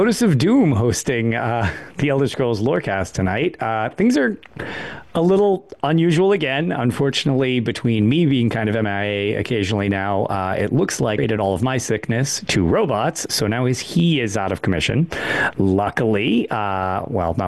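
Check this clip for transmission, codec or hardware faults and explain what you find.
There's one fault here, a spot of damaged data in the compressed stream at about 11.18 s. Part of the encoded stream went bad, so the decoder couldn't make sense of the frame there, lost its place and had to hunt for the next valid frame header before it could carry on. You hear it as a tiny blip, over almost instantly.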